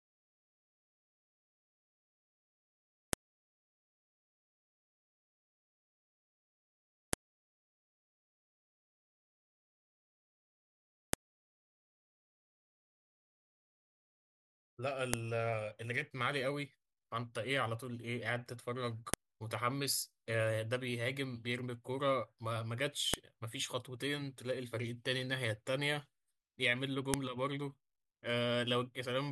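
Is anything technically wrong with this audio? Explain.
Yes. Sharp clicks at 3.13, 7.13, 11.13, 15.14, 19.14, 23.14 and 27.14 s, exactly every 4 s, are a file header played as audio. The speech seems to arrive as 4-second WAV pieces whose header bytes were left in and decoded as samples. Each is a brief, loud snap, regardless of the speech around it. On a waveform, each shows as a tall, narrow spike; on a spectrogram, as a thin vertical line spanning all frequencies.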